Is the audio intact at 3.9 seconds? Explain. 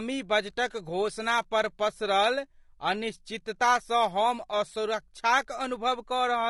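No. At 3.9 s the speech carries low-delay AAC compression damage, present throughout: rough, grainy harmonics with noise between them, likely from short-frame coding at a low bitrate.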